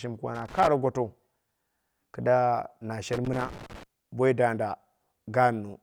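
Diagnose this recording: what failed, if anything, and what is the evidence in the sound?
Loose connector crackle in the analogue wiring, at 0.35 to 0.68 s and again at 3.13 to 3.83 s, between "kida na" and "boi danda". Irregular scratching bursts chop the speech as a worn contact makes and breaks.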